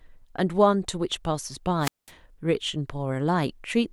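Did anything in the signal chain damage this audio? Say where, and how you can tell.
Yes. The damage is a wireless microphone squelch dropout in the radio link ahead of the converter. From 1.80 to 2.11 s, hiss rises, then the speech drops to near silence for 200 ms. The FM signal faded, and the receiver's squelch muted its output.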